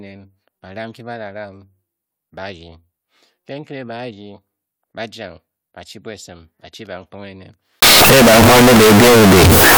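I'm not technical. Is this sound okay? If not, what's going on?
No. From 7.82 s to the end, the speech suffers from float read as integer: the sound likely was stored as 32-bit decimal numbers but played back as if it were 32-bit whole numbers. The player then reads each sample's sign and scale as loudness, flattening the wave into a near-square shape at an almost fixed, high level. That last stretch turns suddenly loud and harsh, with background noise as loud as the talking, though the pitch can still be followed.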